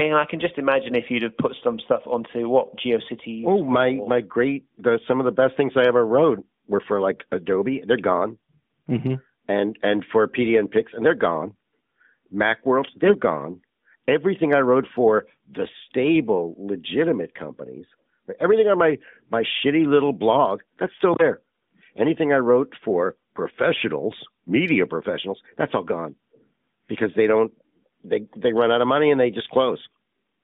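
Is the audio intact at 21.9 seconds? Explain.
Yes, the audio is intact at 21.9 seconds: the speech passes through the AMR narrowband mobile codec at 12.2 kbps as expected, with nothing going wrong at that moment.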